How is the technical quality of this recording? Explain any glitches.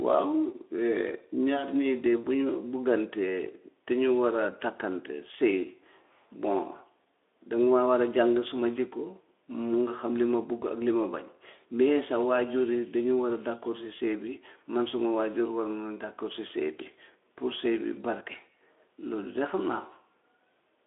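No glitches turn up anywhere in this recording.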